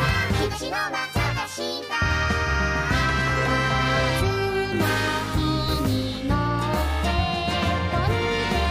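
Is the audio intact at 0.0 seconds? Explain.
Yes, the audio is intact at 0.0 seconds, with no fault present at that moment.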